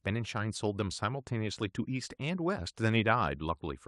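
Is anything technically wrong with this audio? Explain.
No, nothing is technically wrong.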